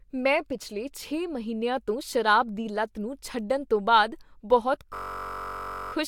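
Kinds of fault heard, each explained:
system hang loop: The computer or its audio driver froze while the hardware kept replaying one ring buffer, so from 4.95 to 5.93 s a 21.33 ms slice of speech repeats 46 times, a steady buzz near 46.9 Hz that fits a 1024-sample buffer.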